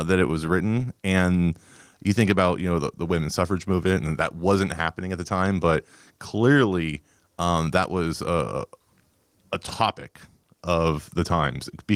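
No technical faults can be heard anywhere in the speech. The Opus voice compression leaves only light coding traces and keeps the full band, which fits hybrid coding at around 24 kbps.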